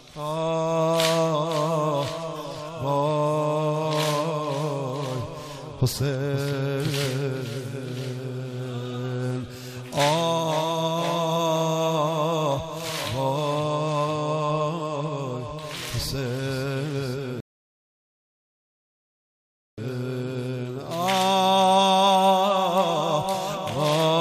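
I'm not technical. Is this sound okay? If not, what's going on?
No, there's one hiccup. At about 17.4 seconds the sound suddenly drops to silence, sits there until about 19.8 seconds, and then carries on from exactly the point where it stopped. That's a rebuffering stall: the player got ahead of the download, ran out of audio to play, and had to wait for more to arrive. Nothing gets skipped, but the pause stretches the clip by roughly 2.4 seconds.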